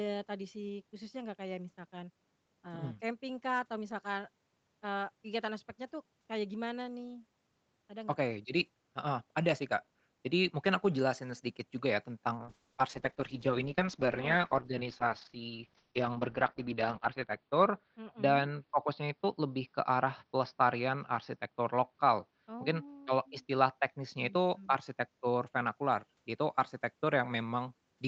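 Speech carried over an Opus call path with audio up to 8 kHz. A call bitrate drop runs from 12.42 s to 27.01 s: coding turns coarse and watery, and the top narrows to 6 kHz, which fits a fall from roughly 32 to 8 kbps, bottoming out for about 4.7 s.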